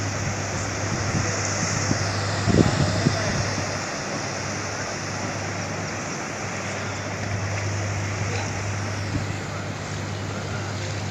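No technical faults turn up at any point in the clip, so there is nothing to describe in time order.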